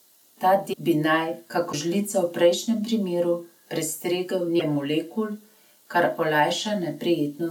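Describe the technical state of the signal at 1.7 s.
At 1.71 to 1.74 s the speech skips ahead with a brief garbled glitch. The likely cause is a broken MP3 bit reservoir: a frame borrowed data that was cut away.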